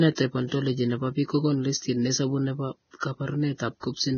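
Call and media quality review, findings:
Hissy, grainy speech throughout, dull top with nothing above 6.5 kHz, roughened tones. Likely Vorbis compression under heavy strain, consistent with a bitrate near 17 kbps: treble quantised so coarsely that detail turns to noise, band cut off.

Pre-echo: short hiss smeared ahead of attacks at 1.78–1.82 s (42 ms), 3.00–3.03 s (27 ms), 3.80–3.83 s (30 ms). Transform codec spreads block quantisation noise, sized for the loud onset, into the quiet moment before it.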